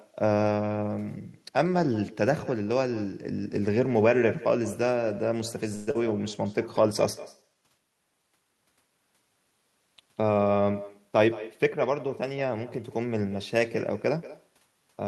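Echo with no canceller runs through the whole clip. Every stretch of speech is trailed, around a fifth of a second later, by a fainter, thinner copy about 16 dB below it. The far end is playing the call through a loudspeaker and its microphone picks that sound up again. Nothing on that side removes it, so the talker's own voice returns after the network round trip and shadows each phrase.

Between 5.75 and 5.97 s the speech is replaced by a fading, buzzy continuation of the last sound for about 192 ms, with no true silence. When the audio resumes, roughly 100 ms of speech is simply gone. The likely cause is a long network dropout: packets stopped arriving, the receiver extended the final sound to cover the gap, and playback picked up later without the lost portion. Delay also shifts by around 50 ms at this point.

A jitter buffer slow-down follows from 7.37 to 7.62 s. The speech plays at about 83% speed while its pitch stays the same, so sounds are drawn out. 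The receiver's buffer was running low or had just raised its target delay, so it repeated single pitch periods over and over to build a reserve. That added about 51 ms of stretched audio within a quarter of a second.

From 11.09 to 12.79 s a jitter buffer speed-up makes the speech run at about 107% speed, again with no change in pitch, and it sounds slightly hurried. Here the buffer held more audio than its target, as happens when delayed packets arrive in a burst. To bring the delay back down, the receiver repeatedly cut out short slices one or a few pitch periods long, removing around a tenth of a second in total.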